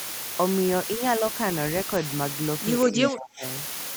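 Low bit depth with dither runs through the whole of this speech clip: a steady, even hiss sits only around 5 dB below the voice, with no grinding distortion. That pattern fits audio reduced to about 4 bits, with random dither added before rounding so that the coarse quantisation error turns into broadband white noise instead of harsh, signal-following distortion. The noise stays constant whether the talker is speaking or pausing. Speech suppressed in double talk appears between 2.85 and 3.44 s, where the voice dips sharply, by roughly 25 dB at its deepest, and breaks up over about half a second in total. The likely cause is an echo canceller that could not tell the local talker from loudspeaker echo while both sides spoke, so it attenuated everything, including the wanted speech. An echo leak shows up from 3.03 to 3.08 s as a brief, delayed copy of the voice arriving 184 ms after the original and only a few dB quieter. 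It most likely comes from a far end playing the call over a loudspeaker, where the echo canceller failed to remove all of what its microphone picked up and sent that residue back down the line.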